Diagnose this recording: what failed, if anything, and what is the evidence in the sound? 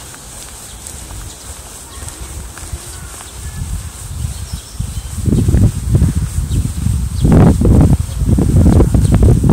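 The signal was driven past the full scale of the converter or sample format, producing hard clipping. Peaks are sliced flat, adding high harmonics. From 5.29 to 6.05 s, about 8 dB of overdrive crackles on loud moments. From 7.25 s to the end, about 15 dB becomes harsh fuzz.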